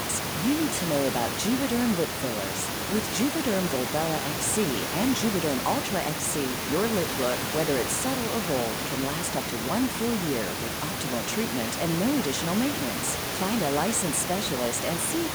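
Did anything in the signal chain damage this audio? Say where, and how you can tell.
No, nothing in the chain damaged this speech.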